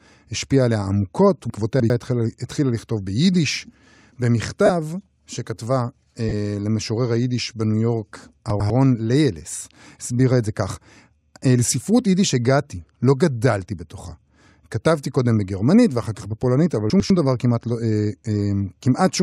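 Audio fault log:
1.5–1.9 s, 8.5–8.7 s, 16.9–17.1 s: chunks out of order. A 100 ms piece of audio plays late: three chunks late in the first case, one chunk late in the other two. The sound jumps back and then forward, with a hard join at each seam. Unlike a dropout, nothing is missing. The sound is only reordered.
4.65–4.70 s, 6.29–6.33 s, 9.6 s: lost LE Audio frames. Gaps of about 37.5, 30 and 15 ms fit runs of five, four and two 7.5 ms frames. The LC3 decoder filled each gap by repeating the last spectrum with randomised phase, so tones become a brief noisy smear rather than the silence or hard click of a plain gap.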